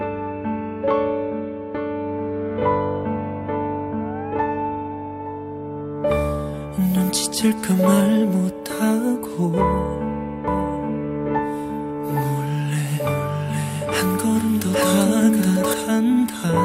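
From 10.48 s to 15.74 s a doubled audio track appears: a second, full-band copy of the sound runs about 0.7 seconds behind, at roughly the same level as the original, then cuts off abruptly at the end. The likely cause is the audio being captured again through a slower path. Unlike an echo or reverb, the copy has no decay or room colour and does not repeat: one clean duplicate switches in and out sharply.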